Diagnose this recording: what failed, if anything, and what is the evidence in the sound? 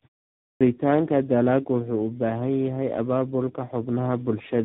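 Codec stage: tandem speech coding throughout. The sound is rough, muffled and warbly with nothing above 3.8 kHz, which fits AMR-NB recoded through G.726, each coder degrading the last.

Playback stage: a clipped start after a pause at 0.43 s. The output device, waking from silence, swallows about 0.18 s, so the sound begins abruptly.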